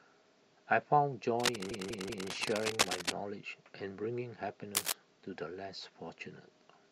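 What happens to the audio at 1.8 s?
At 1.8 s two faults overlap. The first is cable scratch noise, running from 1.40 s to 3.12 s. Dense, uneven bursts of scratching and rustling sit over the speech, roughly as loud as the speech itself. The likely cause is a worn cable, connector or control being moved. Its contact resistance changes quickly, and those rapid changes ride on the signal as noise.

The second is repeated frames, from 1.71 s to 2.29 s. A 192 ms stretch of audio plays again three extra times, so the speech stutters in place. Each restart can bring a blip or click where the repeated block fails to join smoothly. The 192 ms length fits a short run of compressed frames being written or sent more than once. The repeats make the audio 576 ms longer.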